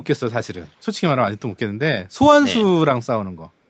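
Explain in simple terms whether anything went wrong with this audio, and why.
From 0.54 to 0.81 s, a very faint copy of the speech returns about 0.18 s late, an echo leak, likely from a loudspeaker's echo canceller missing part of the sound.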